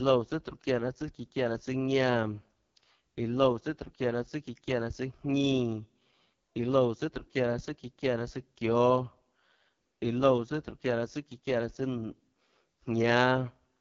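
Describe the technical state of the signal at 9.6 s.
At 9.6 s the speech carries AMR wideband (HD Voice) codec damage, as it does across the whole clip. Content stops near 7.4 kHz, and the coarse pulse-driven vocal tract model leaves it rough and raspy, which fits the codec's lowest 6.6 kbit/s mode.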